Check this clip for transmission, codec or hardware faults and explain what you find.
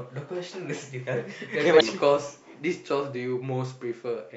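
One fault is present, a codec error in the speech. At 1.77 to 1.81 s, damaged data in a compressed stream: corrupted frames derail the decoder, which loses sync and searches for the next frame header, giving a brief glitch.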